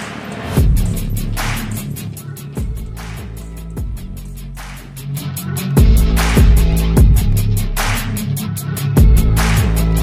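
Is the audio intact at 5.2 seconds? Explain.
No, 5.2 s falls inside a stretch of zipper noise running from 4.91 to 5.27 s. A level move of around 10 dB gets applied in unsmoothed steps, about a hundred a second, and each jump clicks, so you hear a fast zipping riding on the sound.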